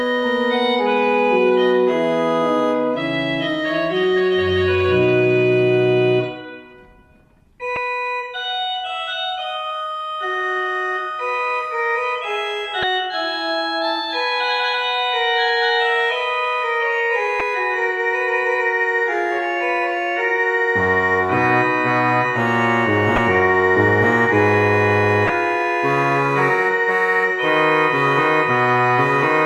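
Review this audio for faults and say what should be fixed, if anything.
Damaged data in a compressed stream at 7.74–7.77, 12.80–12.84, 17.37–17.41, 23.15–23.18 and 25.26–25.30 s: the decoder misreads corrupted frames and resyncs, producing a chirp, squawk, click or short hole. To prevent it, verify file integrity with checksums and carry the stream over a transport with error checking.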